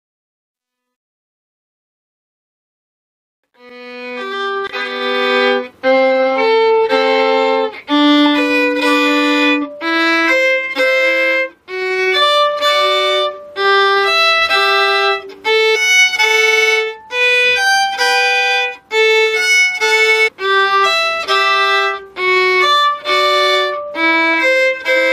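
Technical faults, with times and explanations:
0.0–5.34 s, truncation distortion on a fade: the fade-in itself rises smoothly, but its gain stage kept only 12 bits with no dither. From 0.0 to 2.87 s the low-level signal collapses into coarse square steps, sounding gritty. On a waveform these show as stair-stepped blocks; a spectrogram shows harsh broadband speckle.
15.74–15.76 s and 20.27–20.29 s, damaged data in a compressed stream: corrupted bytes make the decoder misread frames and lose sync while it hunts for the next header, producing a short chirp or blip, each about 20 ms. A spectrogram shows a thin vertical smear; the waveform shows a brief discontinuity.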